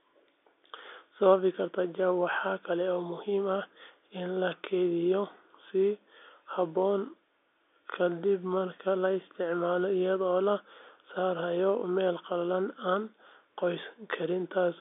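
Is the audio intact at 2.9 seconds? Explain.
Yes, the speech at 2.9 seconds is intact, with nothing there beyond the narrow, slightly boxy band of the G.711 telephone coding it passes through.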